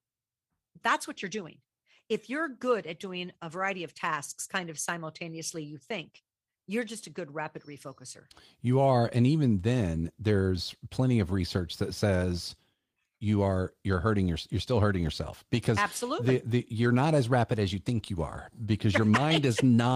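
A speech recording with no technical faults to report.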